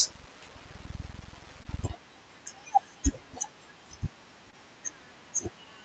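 Brief smears at 1.63 to 1.67 s and 4.51 to 4.55 s are short concealed packet loss: about 20 ms went missing each time and the receiver bridged it by extending the preceding sound.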